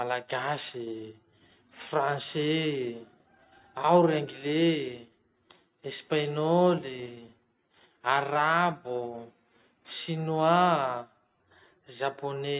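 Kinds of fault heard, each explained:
No kinds of fault are heard.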